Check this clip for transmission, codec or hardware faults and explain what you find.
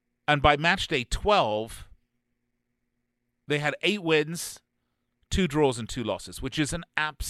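No faults can be heard anywhere in this speech recording. There is nothing in the audio that needs explaining.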